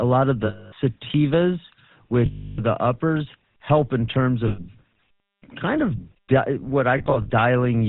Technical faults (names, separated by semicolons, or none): GSM full-rate codec; lost GSM frames